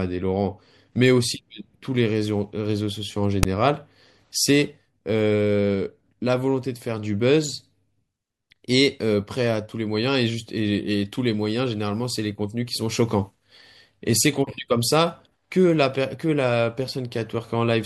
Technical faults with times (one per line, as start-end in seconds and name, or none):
3.43 file tags played as audio